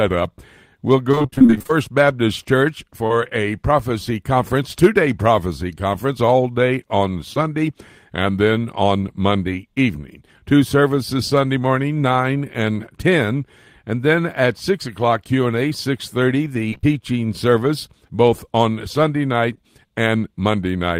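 From 1.11 to 1.71 s there is repeated packet loss, the robotic-sounding kind. Short holes follow one another, each no longer than about 30 ms. The receiver patches each by continuing the last sound. About half the stretch is filled this way, so it turns choppy.

At 3.07 s, just before "a prophecy conference two", a short concealed packet loss leaves a brief smear. About 20 ms went missing and was bridged from the preceding sound.

At 7.34 s, right after "conference all day on", the same fault recurs. Another 20 ms hole is patched and heard as a quick wobble.

From 16.70 to 16.85 s, just before "service both on", repeated packet loss returns briefly. Several gaps of up to 20 ms are patched in close succession. The concealment covers nearly half of that span and gives a short robotic stutter.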